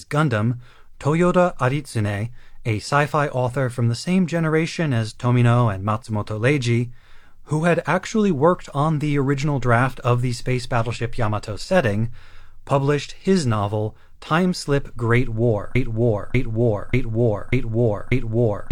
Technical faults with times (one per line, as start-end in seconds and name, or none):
15.75-18.71 broken-record loop